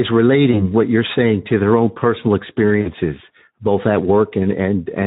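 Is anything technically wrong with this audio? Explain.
Yes. The speech runs through the Speex codec for its whole length, at a rate that fits roughly 11 kbps, and the damage is plainly audible. This CELP codec models the voice with a pitch and filter. At this rate it has few bits left to describe the excitation. So the voice sounds noisy and hoarse, with a grainy, slightly synthetic edge. Any content above 4 kHz is only a shaped noise fill, not real detail.

There is also VoIP packet loss concealed by the speech codec, at two points. The first runs from 0.51 to 0.70 s, just before "what you're saying to". The second runs from 2.81 to 2.89 s, just after "to their own personal". A single 20 ms packet went missing at the first point and about 40 ms at the second. The decoder filled each gap by stretching its last pitch and filter while lowering the gain. This gives a brief buzzy tone or coloured noise that fades. 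Because each frame builds on the previous one, the voice stays weakened and distorted after the gap, which is why the first disturbance lasts well beyond the lost 20 ms.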